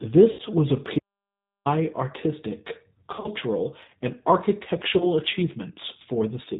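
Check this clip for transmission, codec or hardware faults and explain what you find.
Three kinds of fault are present: codec coloration throughout, three concealed packet-loss bursts, and one dropout to silence.

Throughout, the speech sounds rough, slightly synthetic and dull, with nothing above 4 kHz. This is the G.729 codec at 8 kbit/s, which rebuilds speech from a filter, a pitch predictor and sparse pulses.

At 0.31–0.41 s, 3.12–3.29 s and 4.97–5.13 s, the sound smears into a fading buzzy tone or coloured noise. These are VoIP packet losses concealed by the speech codec, which extrapolates from its last frames. The first burst ends just before "was a", and the middle one is scattered across about 120 ms.

From 0.99 to 1.65 s, right after "was a", the audio drops out to total silence with no room tone for about 0.67 s. This audio dropout to silence was likely caused by the input link briefly failing.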